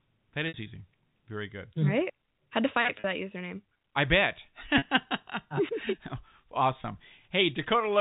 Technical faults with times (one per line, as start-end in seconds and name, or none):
0.48-0.54 packet loss with pitch repetition
3.00-3.04 packet loss with pitch repetition
4.78-4.82 packet loss with pitch repetition
5.86-8.00 switching supply whistle
6.82 packet loss with pitch repetition